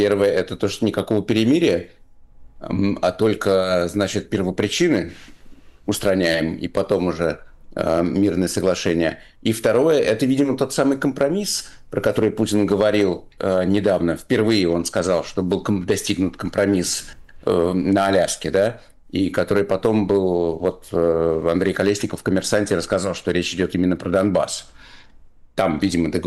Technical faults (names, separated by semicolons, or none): hard clipping